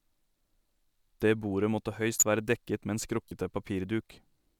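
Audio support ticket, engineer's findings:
Short chirp-like burst at 2.13–2.23 s, loud and spanning about three frames; fainter single-frame blip at 3.28–3.32 s. Corrupt frame decoded: flipped bits in compressed frames misread as gains and codes, energy landing at wrong frequencies. Suspect decoder input path.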